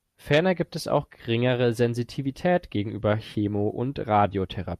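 Nothing stood out as a technical fault on listening to this speech recording.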